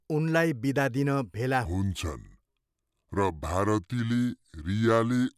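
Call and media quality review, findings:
Wrong sample rate from 1.65 s to end, after "बिदा दिन भेला": speech slows to 0.73x and drops about 5.5 semitones together, consistent with 44.1 kHz audio played at 32 kHz.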